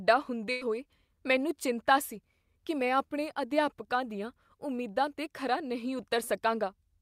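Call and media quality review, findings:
Burst of packet loss, 0.51–0.63 s: about 100 ms missing before "ਹੋਏ ਮੈਨੂੰ ਚਿੰਤਾ ਸੀ". Jitter buffer/PLC extends last sound, fading it as a held buzz or hiss for about 97 ms, then resumes later with the intervening speech gone.

Short concealed packet loss, 3.33–3.37 s, between "ਸੀ ਕੀ ਮੈਂ ਆਪਣੇ" and "ਅਧਿਆਪਕਾਂ ਦੀਆਂ": roughly 20 ms late or lost at the decoder. Concealment continues the prior pitch or noise, blends back, leaving a brief smear or wobble.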